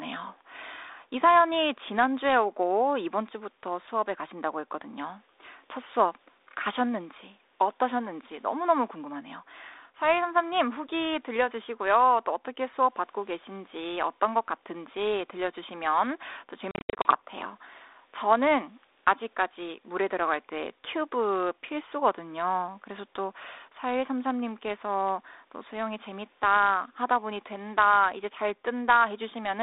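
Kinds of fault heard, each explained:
Packet loss on an ADPCM call: from 16.71 to 17.17 s, about 240 ms of sound drops out in scattered hard-edged silent gaps over roughly 340 ms, the longest about 70 ms. Each gap shows as a blank vertical strip on the spectrogram. After each gap the mistracked predictor brings the sound back slightly distorted, and it settles within tens of milliseconds.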